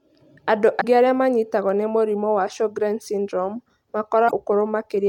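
A short glitch at 0.77–0.84 s, just before "arĩa manyitagwo nĩ mũrimũ", and again at 4.25–4.31 s: damaged data in a compressed stream, where the decoder misreads corrupted frames and resyncs.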